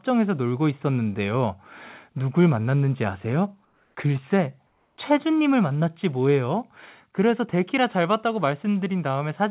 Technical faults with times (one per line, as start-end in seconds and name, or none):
3.65-3.95 comfort noise in place of the background
4.67-4.97 comfort noise in place of the background